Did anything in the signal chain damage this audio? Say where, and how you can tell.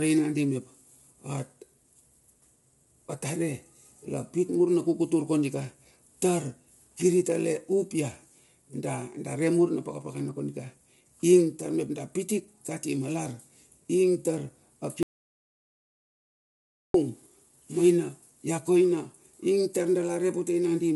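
Yes. Codec stage: the speech sounds rough and grainy throughout, with nothing above 11.6 kHz, likely low-delay AAC compression at around 32 kbps, short frames smearing the harmonics.

Network or input stage: a hard audio dropout to silence from 15.03 to 16.94 s, about 1.9 s of silence with no room tone, likely a lost input or link.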